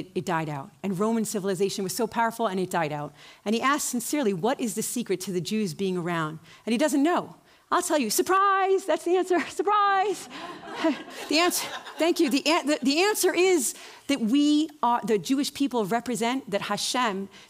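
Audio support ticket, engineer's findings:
De-emphasis applied wrongly, 8.37 to 11.10 s. Treble-cut stage engaged on a path carrying no pre-emphasis, or a second de-emphasis stacked on the first. Smooth downward tilt above the midrange, about 14 dB down at 10 kHz relative to 1 kHz. Result: sound turns dull and muffled for that stretch, upper detail and air reduced. Check filter flag or emphasis metadata handling at the switch point.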